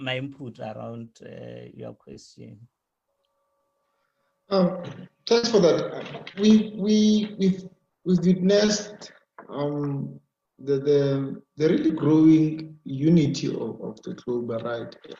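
At 1.05 s and again at 2.13 s there is short concealed packet loss: about 20 ms of audio failed to reach the decoder in time, and the receiver papered over the hole by extending the preceding sound, pitched if it was tonal and as shaped noise if not, before blending back into the real signal. Each one is heard as a brief smear or wobble.

From 5.37 to 5.45 s comes a burst of packet loss. Several packets in a row went missing, leaving about 60 ms with nothing real to play. The receiver kept the last sound going and let it fade across the gap, so a held buzz or dying hiss briefly replaces the audio, and when sound resumes the 60 ms in between are simply gone.

The short concealed packet loss then returns at 6.31, 8.65, 11.87 and 13.23 s, each time another 20 ms filled in the same way and heard as the same momentary smear or wobble.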